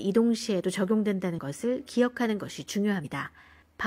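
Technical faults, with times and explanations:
1.34–1.39 s, compressed frames skipped: the speech lurches forward about 40 ms, consistent with one lost frame of roughly 43 ms.
3.01–3.05 s, compressed frames skipped: a larger jump of about a tenth of a second, which fits around two dropped frames.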